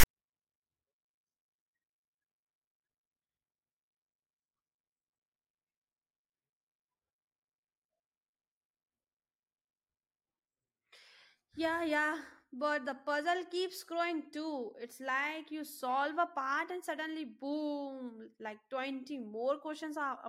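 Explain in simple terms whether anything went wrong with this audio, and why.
Something did go wrong at the very start. From 0 to 0.06 s, file tags were played as audio. The player read text as sound, giving a brief harsh rasp, then silence.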